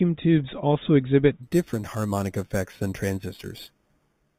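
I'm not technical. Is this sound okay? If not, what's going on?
No. From about 1.43 s, just after "tubes also", to the end, there's imaging from sample-and-hold upsampling. The speech was stretched from 8 kHz to 48 kHz by repeating samples without smoothing. That adds a bright, metallic fizz above 4 kHz that rises and falls with the speech.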